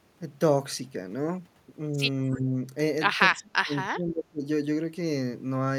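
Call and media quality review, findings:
Echo leak, 2.32 to 2.4 s: brief, very faint delayed copy of the speech trailing the original by 294 ms. Likely a residual echo from a far-end loudspeaker path whose echo canceller failed to subtract all of the microphone pickup, so a short scrap was returned. The fragment is low in level, well below the speech.

Speech suppressed in double talk, 2.35 to 2.57 s: talker level dips by around 10 dB for roughly 200 ms, overlapping the echo fragment. Likely the echo canceller hit overlapping talk, could not separate the local talker from loudspeaker echo, and attenuated both.

Speech suppressed in double talk, 3.31 to 4.44 s: deeper suppression, dropping by up to about 30 dB, with close to a second of speech affected. Same likely mechanism: canceller misjudging simultaneous talk as echo and clamping the send path.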